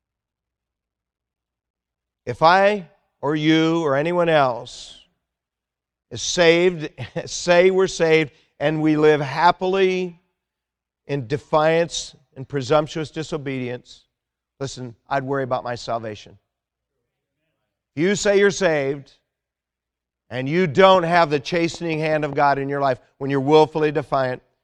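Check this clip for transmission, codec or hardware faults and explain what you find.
One fault turns up, a train of clicks. Just after "and you", from 20.95 to 22.34 s, about seven evenly spaced pops tick across the speech at roughly 5.1 per second, peaking about 5 dB above it, likely from interference or a faulty connection or power supply repeatedly injecting a pulse.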